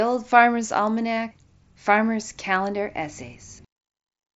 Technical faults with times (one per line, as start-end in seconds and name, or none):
1.13-1.17 concealed Bluetooth headset packet loss